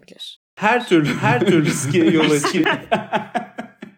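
A doubled audio track runs from 0.80 s to 2.64 s, where a second copy of the speech sits about 0.7 seconds behind the first at roughly the same loudness. The echo is dry and full-band, with none of the decay or room colour a real reflection would have, and it switches in and out abruptly at both ends. The likely cause is the same signal being captured again through a slower path, or an edit leaving two copies out of step.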